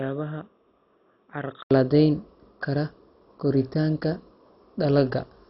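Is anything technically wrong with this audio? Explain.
Yes, two faults. From the start to 1.71 s, the input likely came from a poorer device, such as another microphone or a headset's call profile, before recording returned to the main input. That device passes nothing above 3.8 kHz, sits roughly 10 dB quieter and adds faint noise of its own, far below the speech. So the opening sounds boxy and muffled, with a silence of 80 ms at the switch before fuller sound returns.

Throughout, the speech shows heavy damage that likely comes from MP2 compression at a very low rate, which fits something like 32 kbps. Layer II splits the signal into 32 sub-bands and shares out too few bits, so upper bands are shut off entirely and nothing survives above 5.6 kHz. The bands that remain are coarsely quantised, giving a dull, gurgling, granular roughness across the whole clip.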